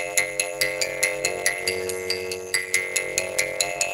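A block size mismatch (padded) runs through the whole clip: each block arrives short and is topped up with silence, fitting a 512-sample read. The gaps produce a steady 93.8 Hz buzz, and the audio plays at 0.625 times its normal speed with unchanged timbre.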